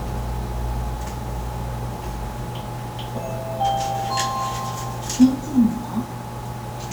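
Low bit depth without dither runs throughout the clip: a grainy distortion that follows the sound, roughly 25 dB below it, turning quiet passages gritty and sputtery. The likely cause is rounding to 7 bits with no dither, so the error tracks the signal.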